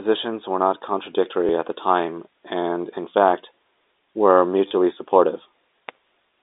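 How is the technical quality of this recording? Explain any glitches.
The recording has two brief robotic stutters in its speech, heard over a narrow telephone band of roughly 300 Hz to 3.7 kHz that comes from G.711 mu-law coding.

At 1.47 to 1.49 s, just before "at the time and", and again at 4.68 to 4.71 s, there's a buzzy hiccup. This is packet loss with the last packet repeated. Audio went missing (20 ms, then 30 ms), and the receiver replayed its last chunk, which fits 10 ms packets. Those joins seldom align with the pitch, and the repeats buzz at the packet rate.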